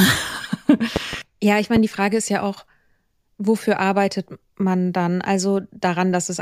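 Loud pops break into this speech clip three times in under a second: a double pop between 0.96 and 1.16 s, standing roughly 15 dB above the speech, then a single shorter one from 1.76 to 1.79 s, around 10 dB up. Each is a sharp transient riding on top of the speech, which carries on beneath it. The likely cause is a sudden voltage step, such as a plug, switch, static discharge or driver glitch, shaped by the following circuitry.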